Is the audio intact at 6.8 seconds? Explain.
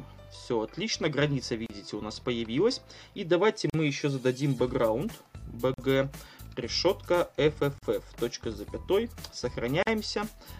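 Yes, the audio is intact at 6.8 seconds, with no dropout, click, distortion or other fault audible at that moment.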